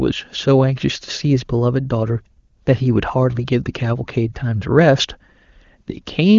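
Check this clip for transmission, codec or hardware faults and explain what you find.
I find no faults in this clip.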